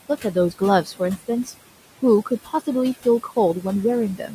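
Noise suppressor artifacts run through the whole clip. The suppressor pulls down the bands it judges to be steady noise by about 17 dB, frame by frame. The room noise, which sits about 16 dB below the speech, sinks in the gaps and swells back under each phrase. Unlike an ordinary noisy room, the background pumps in step with the speech instead of staying level.

Speech cut by the noise suppressor happens three times, from 0.84 to 1.0 s, from 2.29 to 2.62 s and from 4.17 to 4.33 s. Each time about a tenth of a second of quiet speech is mistaken for noise and turned down with it, by about 10, 16 and 11 dB at the deepest. The cut parts sound swallowed rather than clicked off. That softening, with no silence and no glitch, separates it from a dropout.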